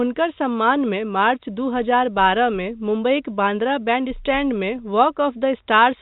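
There are no technical faults to describe in time order in this speech recording, which comes through a G.711 telephone path.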